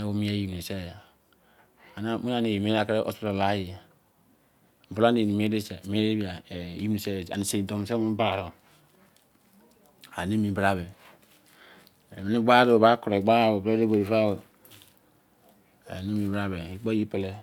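Nothing goes wrong anywhere in this speech recording; there's simply no technical fault to point to at any moment.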